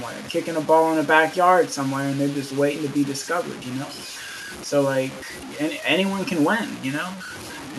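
Throughout, the speech is grainy and gritty, likely low bit depth without dither; the distortion tracks the voice and vanishes in pauses, unlike steady hiss, fitting truncation to about 6 bits.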